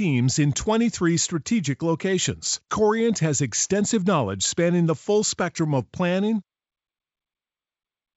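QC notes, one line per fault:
Nothing stood out on listening to this speech clip that would call for a QC note.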